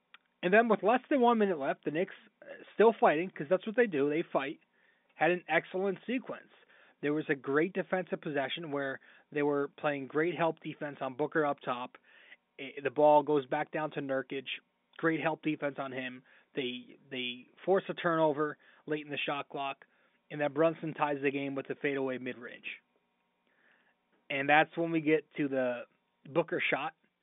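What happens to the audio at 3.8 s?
At 3.8 s the audio is intact, with the speech carried cleanly through the G.711 telephone coding and its narrow line band.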